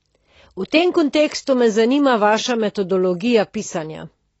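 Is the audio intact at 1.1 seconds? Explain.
No. At 1.1 seconds, as throughout the clip, the speech sounds dull and smeared, with a fizzy, warbling texture on sibilants and sustained sounds, and nothing is audible above about 7.9 kHz. This is likely AAC compression: AAC-LC quantises the spectrum so coarsely that it lowers the cut-off and leaves gaps or substitute noise in the bands it can't afford to code. The plainly audible damage fits a low bitrate of around 24 kbps.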